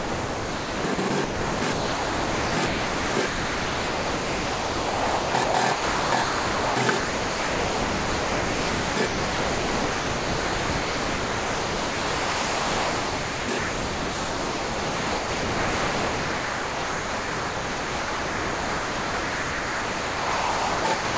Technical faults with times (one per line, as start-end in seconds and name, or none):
0.00-21.18 sound chopped by the voice detector